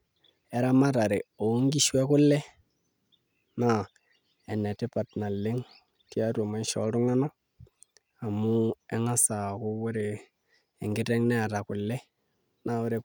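Speech recording with no technical faults detected.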